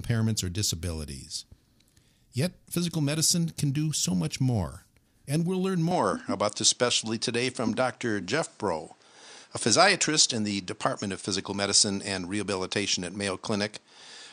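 From 5.91 s, after "we'll learn", the speech turns duller and boxier, with nothing above 9.5 kHz and faint new background noise about 40 dB below the speech, yet no gap and no level change. The likely cause is an input switched to a poorer device.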